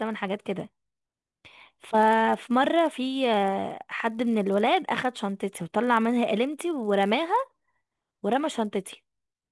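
A speech recording carries a 100 Hz buzz from start to finish. It comes from a resampler restarted on every block. Each 10 ms block was converted alone, leaving a small error at every edge. The buzz sounds only while there is signal.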